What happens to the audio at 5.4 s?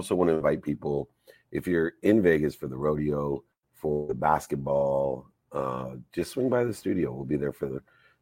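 Nothing goes wrong at 5.4 s; the audio runs through that moment intact, with no fault to be heard there.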